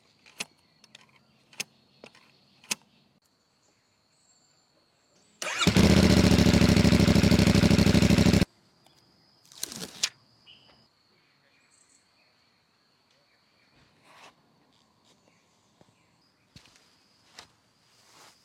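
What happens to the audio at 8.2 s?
Nothing goes wrong at 8.2 s; the audio plays through that moment intact, with no dropout, click or other fault.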